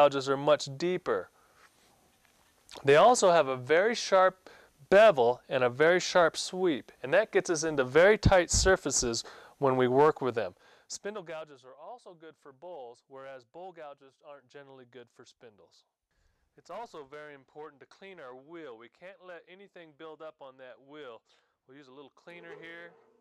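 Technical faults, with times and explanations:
10.17–11.58 s, zipper noise: the level drops by roughly 25 dB over this stretch, but instead of gliding down it moves in coarse jumps, about thirty a second, with no smoothing between them. Each jump puts a tiny discontinuity into the waveform, so a fine ticking rides on the sound only while the level is moving. That stepping is what sets this apart from an ordinary fade.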